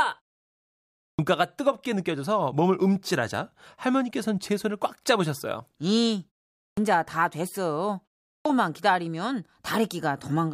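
Speech in which three phrases burst in abruptly out of silence with their first sounds missing, a clipped start after a pause. At 1.12 s, after about a second of quiet, roughly 67 ms is gone; at 6.71 s, after a 0.48 s gap, about 64 ms; and at 8.38 s, following a 0.39 s pause, about 73 ms. The output device powers down during silence and takes those tens of milliseconds to wake and relock.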